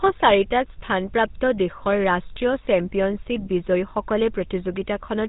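From start to finish the speech carries the signature of the GSM full-rate codec. The codec rebuilds the voice from a vocal-tract filter excited by evenly spaced pulses, and that thin pulse train gives the plainly audible buzzy, gravelly grain. Nothing survives above about 3.8 kHz, and the rate fits 13 kbps. A plain band-limit would sound muffled but smooth. Here the buzz rides on the voice itself, and that roughness marks a codec rather than a simple filter.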